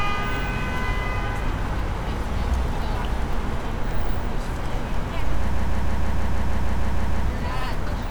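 Everyday sound, and from 5.53 to 7.25 s it hits repeated frames: a 156.7 ms block loops 11 extra times, which fits a run of six compressed frames, stretching the clip by 1.72 s.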